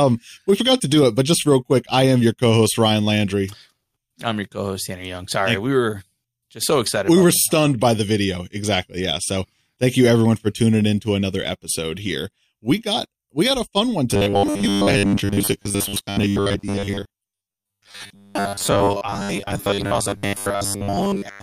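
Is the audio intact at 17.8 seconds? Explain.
No. From 14.11 s to 21.42 s the speech is a metallic 100 Hz buzz, robotic sound from repeated short buffers, likely a 10 ms chunk replayed most of the time.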